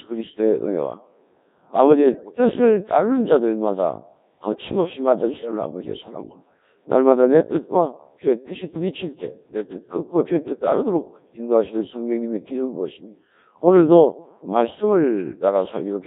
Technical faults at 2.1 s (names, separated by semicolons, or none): Codec 2 vocoder; bit errors on digital voice radio